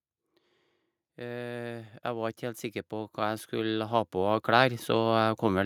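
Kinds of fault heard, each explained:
Automatic gain rising, from 1.15 s to 5.61 s: the gain control judged the incoming speech too quiet and kept turning itself up. Because it acts on the whole signal rather than on the voice alone, the talker and the surrounding background noise grow louder together, climbing by about 16 dB across those four and a half seconds. The swell is slow and steady, with no sudden step anywhere.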